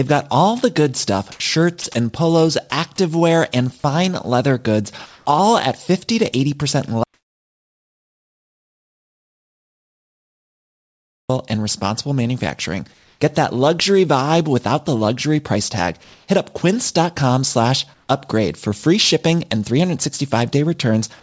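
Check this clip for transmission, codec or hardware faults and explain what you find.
Three kinds of fault are audible: comfort noise in the pauses, two brief clips by the voice detector, and one long dropout to silence. The call path's band limit is also audible. Nothing is heard above 8 kHz, which fits a wideband codec such as G.722.

Comfort noise in place of the background appears five times: 1.32–1.40 s, 5.06–5.26 s, 12.94–13.20 s, 16.04–16.28 s and 17.94–18.08 s. The likely cause is discontinuous transmission. The sender stops in pauses, and the receiver plays synthetic noise instead. The real background sits about 37 to 44 dB below the loud passages. The fill is flat and featureless. At 1.32 s it jumps about 9 dB louder. Later patches shift by only about 1 to 2 dB.

Sound dropped by the voice detector occurs twice: 1.82–1.84 s and 2.70–2.72 s. Each gap is 20 ms long. The detector likely took quiet sound for background and stopped sending for a moment. 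The receiver then filled the gap with comfort noise. The result is a tiny hole, heard as a brief nick of steady noise in the sound. Then the sound resumes.

An audio dropout to silence runs from 7.04 s to 11.29 s, about 4.26 s. The input was likely lost, and silence was written in its place. The sound cuts off mid-flow. The gap is silent, with no room tone at all. Whatever was said in that stretch is gone. The sound then returns abruptly.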